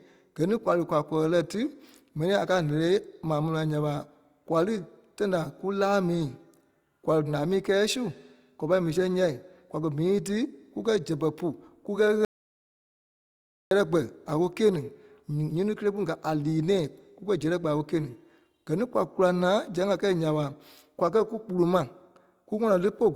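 At 12.25 s the speech cuts to total silence until 13.71 s. This is an audio dropout to silence, likely a lost input. About 1.46 s is gone.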